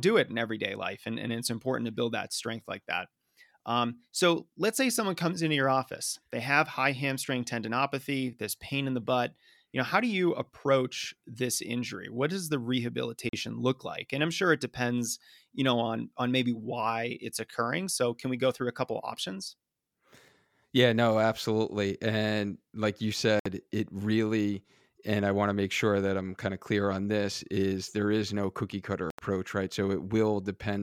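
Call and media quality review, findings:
Silent gaps with abrupt edges; speech resumes as if it had played on. 13.29–13.33 s (about 41 ms, before "look like and i'm"), 23.39–23.46 s (61 ms, after "absolutely and like you"), 29.10–29.19 s (81 ms, after "is no cookie cutter"). Likely Bluetooth dropout: late packets discarded. Gap lengths fit two to four lost packets.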